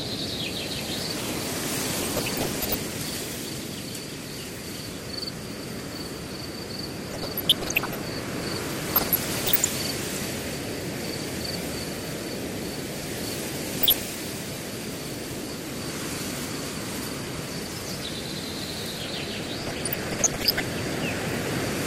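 From the first moment the sound is dull and plainly granular. The top end thins out and flickers as whole upper bands switch off and return, and what remains has a coarse, gurgling texture. This is MP2 compression, likely MPEG Layer II coding at a low rate, consistent with roughly 80 kbps. Its steadiness across the whole clip separates it from the short bursts that come later.

DAB burbling breaks in at 2.0 to 2.77 s, 7.02 to 8.0 s, 8.86 to 9.68 s, 13.81 to 14.12 s and 19.59 to 20.6 s. Each burst puts short blips of noise into single sub-bands over the sound. A small fraction of bits, around a percent or less, got past error correction and corrupted samples and scale factors, so single sub-bands jump in level for up to a frame. That sudden, erratic jumping is what distinguishes it from the constant dullness of the compression.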